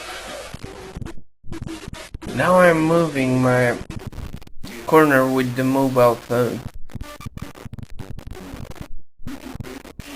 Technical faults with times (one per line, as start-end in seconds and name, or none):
0.00-4.00 adaptive stream starting at a low bitrate